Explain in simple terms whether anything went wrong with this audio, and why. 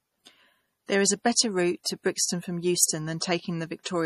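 Yes: the whole speech recording sounds watery and swirly, with nothing above 14.2 kHz, likely from MP3 compression. A simple treble filter would dull it without that bubbling.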